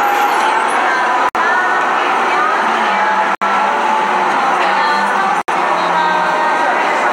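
Separately encoded pieces were joined without trimming the encoder's start delay and last-frame padding, leaving a gap at a join of encoded pieces every 2 seconds. The sound drops out from 1.29 to 1.35 s (60 ms), 3.35 to 3.42 s (67 ms) and 5.42 to 5.48 s (67 ms). Each gap has smeared edges, and the sound then resumes exactly where it stopped.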